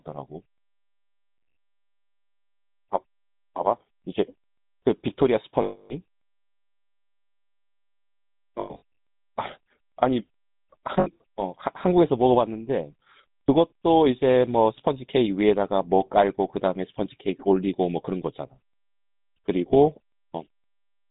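Speech passed through the GSM full-rate codec throughout: nothing above 4 kHz, with a buzzy, gravelly roughness from pulse-driven excitation, which fits 13 kbps coding. Lost GSM frames at 1.36–1.58 s, 5.62–5.93 s, 8.6–8.82 s (scattered gaps, longest run roughly 100 ms) and 11.0–11.08 s are patched by repeating the last good frame, heard as a rough metallic ring.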